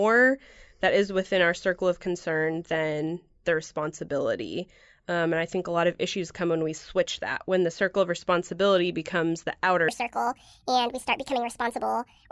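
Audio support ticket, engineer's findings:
Wrong sample rate from 9.88 s to end: speech 1.5x fast, pitched up about 7 semitones. Playback path at 24 kHz on audio that fits 16 kHz capture, no resampling.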